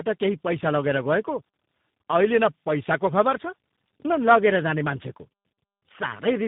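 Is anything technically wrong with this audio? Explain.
Yes. Throughout the speech there is tandem speech coding: the sound points to about three speech codecs in a row, likely ending in a low-rate coder such as G.729A. Each stage re-encodes the previous stage's damage, so the speech sounds rough, muffled and warbly. A spectrogram shows nothing above 3.8 kHz and smeared, blotchy harmonics.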